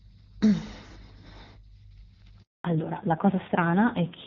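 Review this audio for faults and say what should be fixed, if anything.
A handover gap opens at 2.42 s and lasts 220 ms, to 2.64 s. The speech cuts off within a few tens of milliseconds and gives way to dead silence. It matches the call being moved between networks with no speech frames delivered during the switch, so whatever was said in that window is gone. To prevent it, the network should prepare the target link before switching, using make-before-break handover, so frames keep flowing across the transition.

From 2.64 s to the end, the sound shows a fallback to narrowband. Before the gap, the AMR wideband (HD Voice) codec carried the call with at most faint coding damage. After it, nothing remains above 4 kHz, and the speech turns dull and rougher. That roughness points to a low-rate narrowband mode such as AMR-NB at 5.9 kbit/s rather than a higher one. To prevent it, the target cell should support AMR-WB so the codec does not need to be renegotiated down at handover.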